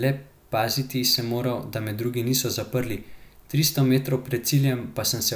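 Nothing stood out as a technical fault when listening to this speech recording.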